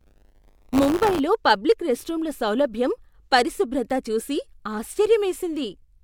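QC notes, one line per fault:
0.00–1.20 s, buffer tearing: a robotic 100 Hz rattle rides the speech until just before "పబ్లిక్ రెస్ట్రూమ్ల సౌలభ్యం పరిశుభ్రత". A small slice of each cycle, which fits a period of about 10 ms, replays audio a few tens of milliseconds old between hard joins. The waveform shows steps every 10 ms, and the spectrogram shows evenly spaced vertical click lines.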